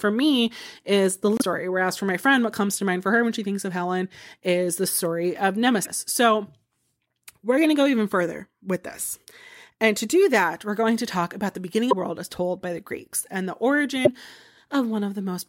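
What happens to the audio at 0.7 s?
Nothing goes wrong at 0.7 s; the speech plays through that moment intact, with no fault to be heard.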